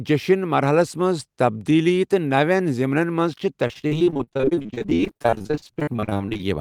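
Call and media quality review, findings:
Repeated packet loss (robotic sound), 3.67–6.41 s. Jitter buffer or network path dropping or late-delivering packets in quick succession, dozens of short holes, none longer than 40 ms. Concealment extends the last audio into each hole, covering about 43% of the stretch. Speech turns choppy, with pieces missing throughout the final seconds.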